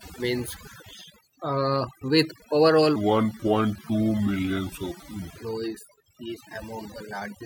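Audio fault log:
throughout, overdone noise removal: A noise reduction stage was driven far too hard, so every frequency band that dips near its noise estimate gets pulled down or shut off outright. Quiet parts of the speech are removed along with the noise. The background drops away into twinkling, chirpy specks where isolated bands flicker on and off.
2.96–5.37 s, section at the wrong speed: Right after "uh with overall", this stretch is played back at 0.772 times its recorded rate, likely because an editor or player fitted it to the wrong clock. Slowing it drags pitch down by about five semitones at the same moment. The voice abruptly turns deep and sluggish, with syllables stretched and lower in tone, then snaps back to its normal pitch and pace at 5.37 s.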